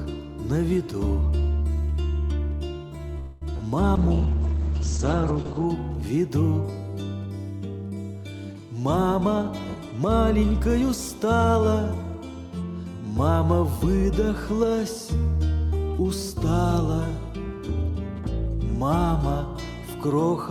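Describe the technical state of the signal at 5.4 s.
At 5.4 s the signal sits inside a call bitrate drop running from 3.96 to 5.73 s. The encoder falls from 64 to 9 kbps, coding coarsely and narrowing bandwidth from 20 to 8 kHz. It sounds muffled and watery, and a spectrogram shows a flat ceiling at 8 kHz.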